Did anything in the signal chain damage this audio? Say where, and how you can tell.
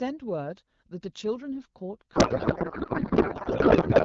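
Yes, at the codec stage. From 2.15 s to the end, the speech collapses into garbled noise and warble that barely tracks it. This is a codec payload misread. The AMR-WB decoder unpacks frames with fields in the wrong places, consistent with octet-aligned packing read as bandwidth-efficient.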